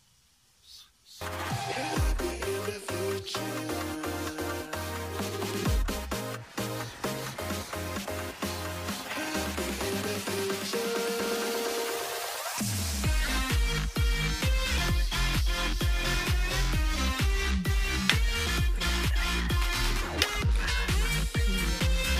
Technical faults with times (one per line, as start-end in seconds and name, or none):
none